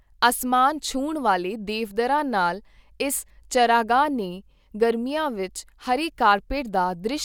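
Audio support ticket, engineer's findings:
No faults found in recording.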